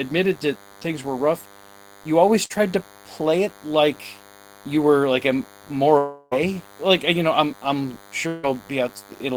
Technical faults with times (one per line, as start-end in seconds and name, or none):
0.00-9.37 DECT cordless phone buzz
2.45-2.52 short concealed packet loss
5.98-6.33 long network dropout
8.27-8.45 long network dropout